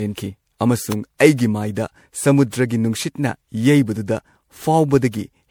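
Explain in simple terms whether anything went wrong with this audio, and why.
Two things went wrong here. The whole clip of speech sounds swirly, smeared and hollow. Sharp starts of sounds come out blurred rather than crisp. This is generation loss. It is most likely caused by the audio being saved as MP3 over and over, about five times. Each save throws away a bit more detail in a slightly different place. Those small losses pile up into this washed, watery quality.

At 0.92 s there is a sharp snap laid over the speech. It is very brief, far shorter than a blink. This is an electrical switching spike. The likely cause is a nearby switch, motor or static discharge making a tiny spark. The audio cable picked that spark up as a click. It sits on top of the speech rather than replacing it.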